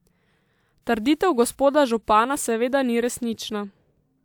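A speech recording with no technical faults to report anywhere in the signal.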